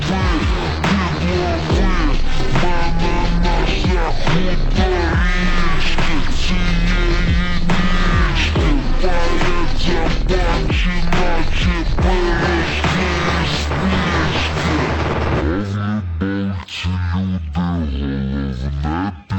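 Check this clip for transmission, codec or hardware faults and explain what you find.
One fault is present. Throughout, stereo read as mono: left-right samples play sequentially as one channel, so audio runs half speed, an octave low; the mirrored upper-band image rules out a plain rate mismatch.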